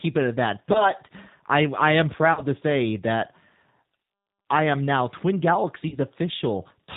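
The whole clip runs through the G.729 codec, and it's plainly audible: everything above 4 kHz is gone, leaving speech rough and slightly synthetic, consistent with an 8 kbit/s low-rate coder. Then there's VoIP packet loss concealed by the speech codec. Just after "it at that", about 20 ms of audio goes missing, and from 0.73 to 0.91 s the decoder keeps extending its last pitch and filter into a stretched, fading sound before "I I am" recovers. It happens again from 2.33 to 2.43 s, with about 40 ms lost before "to say that", and once more from 5.88 to 5.97 s, also about 40 ms.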